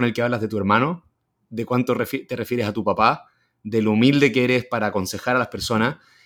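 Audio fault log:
No faults found anywhere in this speech recording.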